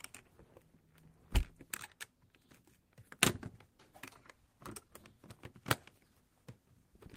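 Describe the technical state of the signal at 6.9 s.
At 6.9 s the audio is intact, with no technical fault at that moment.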